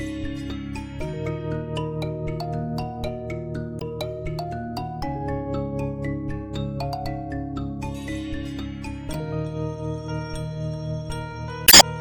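At 3.78 to 3.83 s and again at 9.11 to 9.16 s, damaged data in a compressed stream produces a short glitch of about 48 ms. Bad bytes make the decoder misread those frames and lose sync until it finds a valid header. A longer burst at 11.65 to 11.82 s lasts about 170 ms. On a spectrogram each event is a brief vertical disruption. The waveform shows abrupt discontinuities at the edges.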